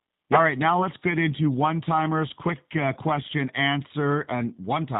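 G.729 codec damage runs throughout, from the first moment to the end. The speech has been squeezed through a low-rate VoIP coder, one that sounds consistent with G.729A at 8 kbit/s. It keeps only a vocal-tract filter, a pitch predictor and a few pulses per 5 ms half-frame. Everything above 4 kHz is gone, so sibilants are dulled. The voice remains intelligible but is plainly rough and synthetic, with a buzzy, slightly mechanical edge.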